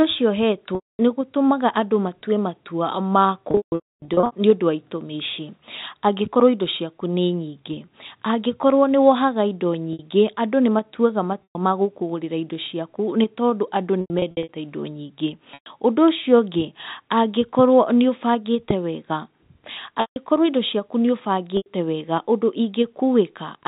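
At 0.75 to 0.99 s the sound freezes into a buzzy held tone that fades to silence before resuming with a short cross-fade. The same happens in broken bursts from 3.51 to 4.32 s, where the longest run is 270 ms, and from 14.01 to 14.49 s. Briefer held, buzzy stretches follow at 9.93 s, 11.43 s, 15.54 s, 20.01 s and 21.57 s, each lasting 60 to 150 ms. This is packet loss with pitch repetition. Packets went missing, and the receiver filled each gap by repeating the last pitch period. That repetition fades out after about 50 ms, so the longer gaps end in silence. The lost stretches come in multiples of 30 ms, which fits 30 ms packets. All of this sits on narrowband G.711 telephone audio capped at 4 kHz.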